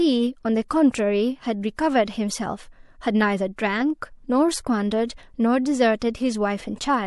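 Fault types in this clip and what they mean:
pre-echo: quantisation noise spread across a transform block leaks about 22 ms ahead of five speech onsets, about 13 to 21 dB up, showing as haze before each attack.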